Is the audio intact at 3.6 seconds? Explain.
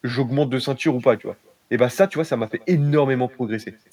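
No. At 3.6 seconds the speech is trailed by a faint, thin copy arriving about a fifth of a second later and about 28 dB down, as it is throughout. This is echo with no canceller: the far end's loudspeaker feeds its microphone, sending the speech back across the network.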